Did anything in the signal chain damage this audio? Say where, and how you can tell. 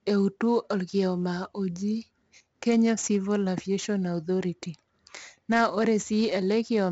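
Yes. The damage is at the codec stage: 4-bit ADPCM compression, heavy, across the whole speech clip. A gritty hiss rides on every loud syllable and falls away in quieter passages. That happens because each sample is coded as a coarse 4-bit step from a prediction, so the error tracks the signal level. Sharp onsets distort where the adaptive step cannot grow fast enough. Nothing sounds above 7.7 kHz, and the grain fits a stream near 64 kbps.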